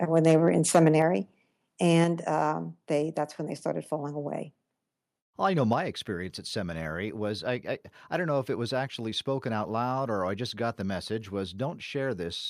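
Microphone overload runs from 0.16 to 1.02 s. The input level likely sat about 6 dB above what the converter could hold, so the tops of the loudest speech peaks are squared off, roughly one and a half percent of samples, giving those moments a crackling, distorted edge.

Microphone volume stepped down occurs at 1.02 s and again at 2.04 s. Each time the speech and background drop together by about 4 dB in a single step, likely because the call software judged the microphone too hot after the clipping and cut its input gain.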